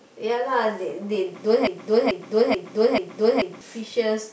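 At 1.67 s the speech falls into a broken-record loop: a 0.44 s fragment repeats exactly, back to back, four times until 3.61 s. The likely cause is a stalled player or stream resending its last buffered piece, so the audio meant for that stretch is lost.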